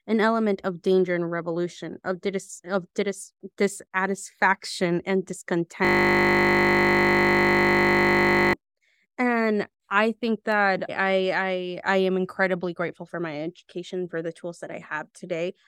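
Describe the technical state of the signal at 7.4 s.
At 7.4 s the signal is inside a system hang loop running from 5.85 to 8.53 s. The hardware keeps replaying one 20 ms buffer, producing a steady 50 Hz buzz. The spectrogram shows frozen horizontal bands at 50 Hz multiples, and the waveform repeats an identical 20 ms cycle.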